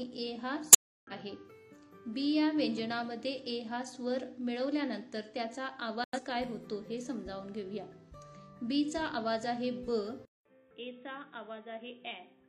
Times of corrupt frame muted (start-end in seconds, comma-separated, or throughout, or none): 0.71-1.12, 6.04-6.20